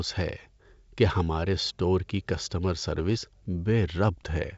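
No technical faults are audible.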